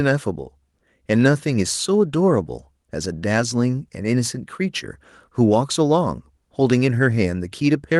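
No technical faults can be heard in the speech, which has simply passed through a normal call codec path.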